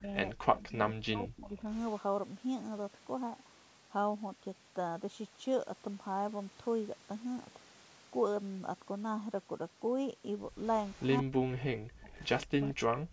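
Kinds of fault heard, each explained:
Speech suppressed in double talk: the talker is turned down, likely by an echo canceller mistaking overlapping speech for echo, by about 15 dB at the start and up to about 40 dB at 0.33–1.65 s, 11.22–12.1 s and from 12.55 s. The waveform envelope collapses, and spectrogram energy vanishes in patches.
Echo leak: a delayed copy of the sound trails by 171 ms, likely residual loudspeaker echo the canceller missed. It sits about 35 to 15 dB below the speech at 1.73–1.99, 10.61–10.69, 10.85–11.2 and 12.06–12.47 s, showing as weaker repeats of earlier spectrogram patterns.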